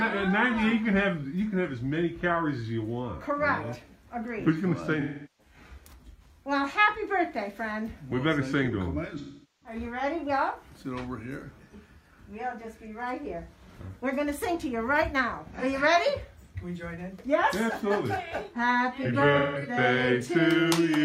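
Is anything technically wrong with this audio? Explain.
Yes. There is AAC frame loss with concealment at 5.00–5.54 s, 9.18–9.76 s, 15.58–15.64 s and 19.38–19.62 s. Missing stretches of about 384, 427, 43 and 171 ms are rebuilt from the last good spectrum, producing smeared, noisy or phasey patches.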